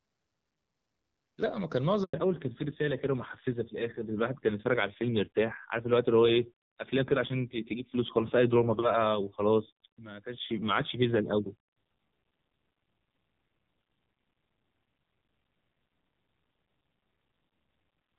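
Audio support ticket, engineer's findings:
Handover gap, 2.04–2.14 s: audio drops out for 100 ms during network switch, no frames delivered. Waveform shows flat silent stretch, fast decay in; spectrogram shows a full-band blank column.

Fallback to narrowband from 2.14 s to end: HD Voice (AMR-WB, clean before the switch) replaced by narrowband codec. Spectrogram shows hard ceiling at 4 kHz, nothing above; rough timbre fits a low AMR-NB rate.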